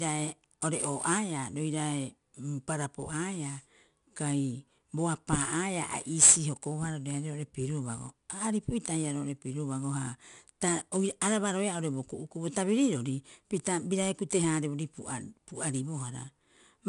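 A speech recording passed through 4-bit ADPCM compression for its whole length, which fits a bitrate near 89 kbps. Each sample is coded as a small 4-bit step from a predicted value, so the coder's error rides along with the signal as broadband grit that swells on louder syllables and roughens sharp onsets, where the step size lags behind. Nothing survives above 10.6 kHz, leaving the top end noticeably dulled.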